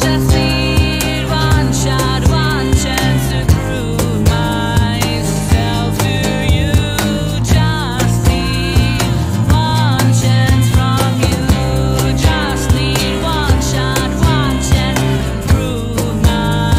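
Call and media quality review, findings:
Repeated buffer at 12.60 s: brief click with hard joins, one piece of about 5.8 ms played twice, which fits a 256-sample buffer. Playback device buffering; new audio late, last buffer replayed once. No audio lost.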